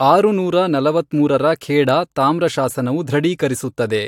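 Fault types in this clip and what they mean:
No audible faults detected in the speech recording.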